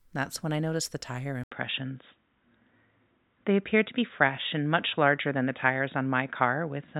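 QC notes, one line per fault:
1.44–6.99 s, input switched to a poorer device: after "I noticed the tire" the speech drops out for 80 ms, then returns dull and boxy, with nothing above 3.8 kHz, a level shift of roughly 5 dB and a new noise floor about 50 dB below the speech. This is likely a change to a narrower-band microphone or headset profile. A spectrogram shows a brief blank gap, then a hard ceiling at 3.8 kHz, while the waveform shows a changed envelope height.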